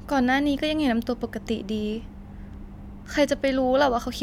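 No technical faults are audible.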